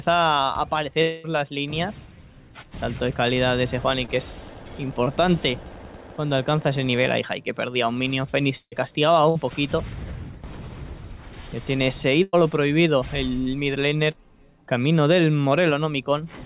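Long network dropout, 1.02 to 1.26 s: about 220 ms of audio goes missing, and the receiver stretches the last sound across the whole gap as a fading buzz or hiss before the audio resumes further on. The cause is likely a stall in packet arrival.

Short concealed packet loss, 4.06 to 4.10 s and 5.04 to 5.08 s: roughly 20 ms fails to reach the decoder each time. The receiver extends the preceding sound and blends it back, leaving a brief smear or wobble where a short sound may drop out.

Burst of packet loss, 8.58 to 8.74 s, 9.30 to 9.37 s and 12.23 to 12.35 s: consecutive packets are lost, about 140, 60 and 100 ms. The continued sound is turned down as each gap goes on, and the first burst fades to about 50 ms of silence before the audio picks up later.

Short concealed packet loss recurs at 14.11 to 14.15 s, another 20 ms patch. Throughout, nothing is heard above 4 kHz, which fits a 64 kbps G.711 mu-law call path.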